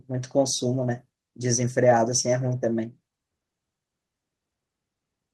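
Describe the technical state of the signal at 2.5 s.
At 2.47 to 2.49 s, a lost packet is rebuilt from error correction. That 20 ms stretch, consistent with a single packet, was played from a low-bitrate copy carried in the following packet, so there is no gap. It sounds rougher and noisier, and a spectrogram shows a grainier band there, with the waveform continuous throughout.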